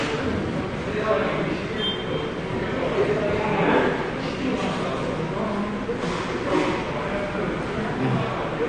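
From start to finish the sound is dull and smeared, with a watery, warbling texture and fizzy, unstable high frequencies. The likely cause is AAC compression, most likely AAC-LC at a low bitrate, which fits about 32 kbps. The encoder throws away detail its hearing model deems least noticeable and drops everything above 9.6 kHz. On a spectrogram there is a hard ceiling at 9.6 kHz, with patchy, flickering holes below it.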